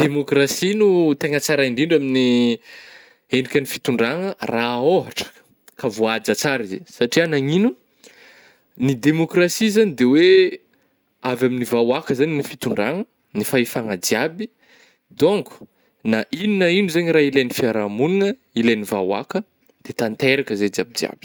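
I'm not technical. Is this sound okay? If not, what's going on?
Yes, this sound is okay, and there's nothing going on with it.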